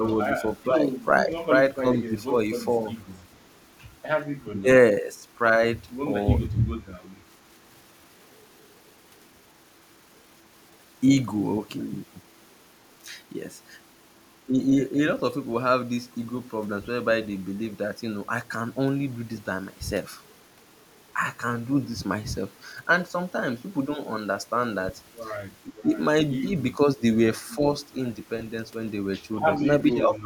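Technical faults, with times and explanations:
0.0–2.37 s, 4.5–5.14 s, 6.49–6.97 s, 25.63–27.63 s and 29.93–30.26 s, speech suppressed in double talk: the speech dips in level in brief pieces, roughly 300 to 700 ms in total per stretch. It falls about 15 dB at its deepest in the first two, about 25 dB at 6.49 s, about 10 dB at 25.63 s and about 20 dB at the end. The likely cause is an echo canceller that could not separate local talk from loudspeaker echo while both ends spoke, so it attenuated everything.
2.96–3.58 s and 29.58–29.92 s, echo leak: a faint delayed copy of the speech trails 424 ms behind the original. It sits about 40 dB below the speech in the first instance and about 30 dB below in the second, so it registers as a ghost rather than a clear repeat. The likely cause is a far end on loudspeaker whose echo canceller let part of its microphone pickup return down the line.
24.89–25.2 s, phantom power thump: a deep low-frequency bump hits and dies away with a decay of about 69 ms. 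Switching phantom power or another supply on a live input produces a sudden DC step. The coupling capacitors pass that step as a single low, heavy pulse before it settles, which is why it is heard as a thump rather than a click.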